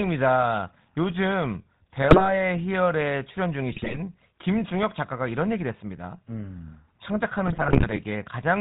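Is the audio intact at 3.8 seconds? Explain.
No. From 3.72 to 3.98 s the speech is hit by GSM bit errors: flipped bits corrupt the decoder's filter, pitch and gain values, so for roughly a quarter second the sound bursts into squawks, pops and gargling. That pattern suggests about a dozen damaged frames. Unlike a clean dropout, the level can spike rather than fall silent. Underneath, the GSM full-rate codec is plainly audible throughout, consistent with a 13 kbps stream: a buzzy, gravelly roughness and nothing above 4 kHz, from the pulse-driven vocal-tract model rather than broadband noise.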